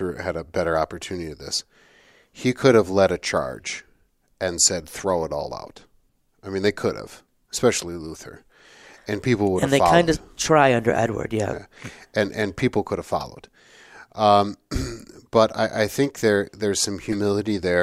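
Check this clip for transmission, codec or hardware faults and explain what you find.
Three corrupt frame decoded faults occur. Flipped bits in compressed frames reached the decoder, which played them anyway, placing energy at wrong frequencies. At 6.10 s a faint glitch from several frames sits far down; at 13.20–13.25 s and 17.12–17.15 s, louder glitches, about -20 dBFS, mark one and four frames respectively.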